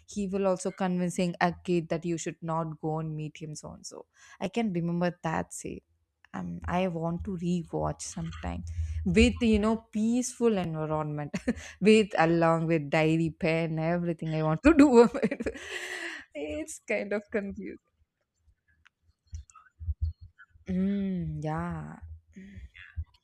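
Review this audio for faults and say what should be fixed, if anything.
Repeated buffer at 4.45 s, just after "so and so i", and at 10.64 s: a piece about 10 ms long sounds twice with a hard join, a brief click that fits the last 10 ms buffer being replayed when new audio arrived late. To prevent it, enlarge the playback buffer or give the audio thread higher priority so new audio arrives before each deadline.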